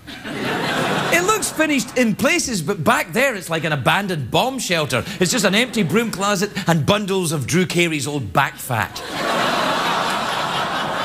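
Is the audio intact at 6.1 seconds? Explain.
Yes, the audio at 6.1 seconds is intact, with no dropout, click, distortion or other fault at that moment.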